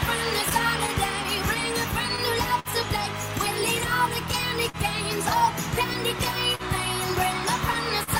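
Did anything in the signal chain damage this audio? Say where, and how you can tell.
Yes. The damage is at the network stage, where the receiver's jitter buffer struggles with a sender clock running roughly 3 percent slow. Small timing hiccups recur at uneven intervals throughout, unlike a single fault, as the buffer drains and the receiver repeats or stretches short pieces.

Scattered short gaps appear between 0.49 and 2.20 s: around seven tiny holes, about 70 ms of patched audio in all, none longer than roughly 10 ms. Each was covered by continuing the last sound, giving brief ticks or smears rather than audible dropouts.

A short stall from a late packet occurs four times, at 2.59 to 2.68 s (53 ms), 4.69 to 4.77 s (43 ms), 6.55 to 6.62 s (40 ms) and 8.03 to 8.10 s (40 ms). The sound is held too long with a slight buzz or dip, then resumes where it left off. Nothing is lost, and each hold is longer than the earlier ticks.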